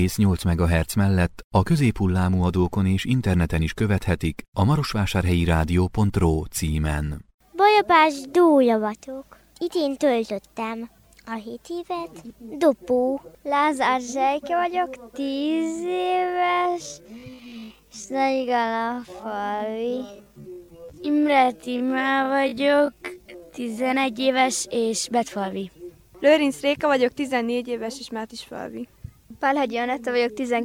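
From 15.16 to 23.88 s, a time-stretched section runs at 0.53x speed and drags. Pitch holds steady, unlike plain slowing, likely from software fitting a length.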